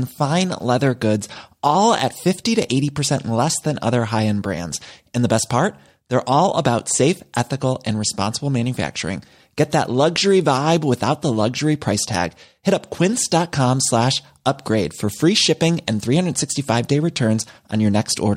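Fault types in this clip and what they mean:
No technical faults can be heard anywhere in the recording. There is nothing to list for any part of the clip.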